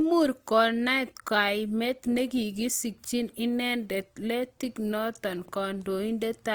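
From start to end, the speech carries plainly audible Opus compression. Tones sound grainy, rough and noisy rather than swirly. Starved bands seem filled with folded or noise content. Bandwidth stays full, up to 20.2 kHz. The likely cause is a low bitrate, near 24 kbps.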